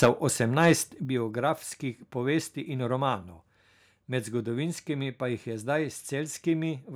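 From 0.02 to 0.09 s the speech distorts with a harsh crackle. This is microphone overload, likely from input volume set too high. Peaks run about 7 dB past the converter's limit, and roughly a tenth of samples lose their tops.

At 0.05 s the level drops suddenly by about 4 dB. This is a microphone volume step-down, likely the call software cutting input gain after the distorted peak. Speech and background fall together in one step.

From 0.64 to 0.72 s, just before "biografskih povesti in", the crackle returns more faintly. Peaks exceed the limit by about 2 dB, and only a small share of samples is clipped.

At 1.05 s, again before "biografskih povesti in", the level steps down once more, by about 6 dB. The whole signal becomes abruptly quieter.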